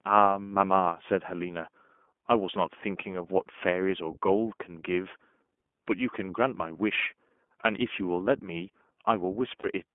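A speech recording carried over a narrowband VoIP link, with iLBC codec coloring audible the whole way through. On a spectrogram nothing appears above 4 kHz, and the energy sits mostly in a telephone band of roughly 200 Hz to 3.4 kHz. The voice comes across as plainly rough and slightly synthetic, because each short frame's excitation is coded on its own rather than refined from the previous one. The character fits iLBC's 20 ms mode at about 15.2 kbps, where the rough texture shows as grainy, smeared harmonics instead of clean striations. From 9.60 to 9.66 s, lost iLBC frames leave a 40 ms hole that is consistent with two dropped 20 ms frames. The decoder fills it by repeating the last pitch cycle blended with noise, so it is heard as a brief held, buzzy vowel rather than silence. In the waveform this appears as a short run of near-identical repeating periods, and on the spectrogram as flat, unchanging harmonic bands. 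Because each frame decodes independently, normal speech returns almost immediately afterward.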